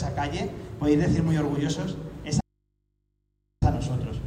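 At 2.41 s the sound drops out abruptly until 3.62 s, about 1.2 s, leaving only faint mains hum, likely a momentary input loss: an audio dropout to a faint residue.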